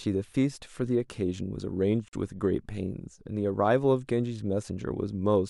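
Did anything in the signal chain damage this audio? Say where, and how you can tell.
Yes. Gap at a join of encoded pieces, 2.08 to 2.13 s: a 47 ms gap splits the speech because separately encoded segments kept their encoder delay and padding.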